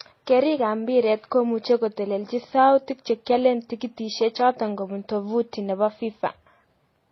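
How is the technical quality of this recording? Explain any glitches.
The quality's fairly rough: the speech sounds dull and smeared all the way through, with a couple of layers of compression damage stacked on top of each other.

Throughout, it's transcoding between lossy codecs. Nothing comes through above about 5.9 kHz, and you get MP3-style swirly smearing mixed with HE-AAC's own coding artefacts. Each encode added its own artefacts on top of the last, so this was likely MP3 re-encoded to HE-AAC, both at low rates around 24 kbit/s.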